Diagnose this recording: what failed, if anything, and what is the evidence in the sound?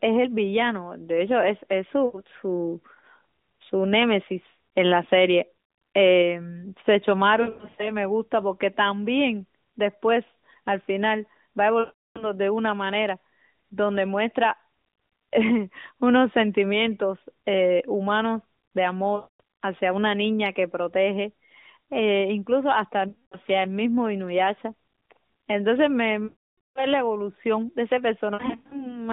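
The fault is lost AMR speech frames on the radio link, at 2.06, 7.42, 11.80, 19.16, 23.08, 26.24 and 28.34 s. The decoder covered each gap by replaying the last good pitch and vocal-tract settings at falling gain. The short 2.06 s loss is a brief drawn-out fade. The longer runs smear into a drawn-out tone that fades, worst at 26.24 s (about 0.5 s). On a spectrogram, the 200 Hz–3.7 kHz narrowband harmonics freeze and dim, and the waveform envelope decays before speech resumes rough.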